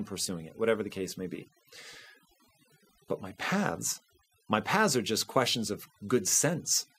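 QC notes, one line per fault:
Throughout: overdone noise removal. A noise reduction stage set too aggressively is cutting individual frequency bands whenever they sit near its noise estimate, taking quiet speech detail with them. The background drops and breaks up into twinkling, warbling specks.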